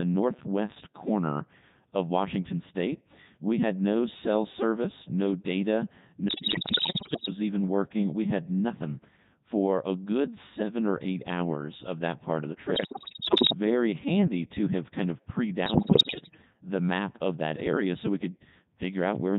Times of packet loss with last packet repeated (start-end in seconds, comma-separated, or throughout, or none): none